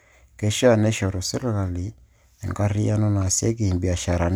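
No technical faults are audible.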